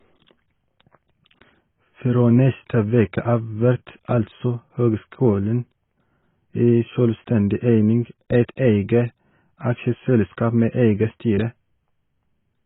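From start to finish the speech sounds dull and boxed-in, with nothing above about 3.8 kHz and the lingering artefacts of a low-bitrate encoding. This is low-bitrate audio saved at a high bitrate: the damage fits a first pass through a very low-bitrate codec, around 16 kbit/s AAC, that was likely later re-saved as a high-bitrate MP3. The larger file cannot bring back the missing top end or undo the earlier artefacts.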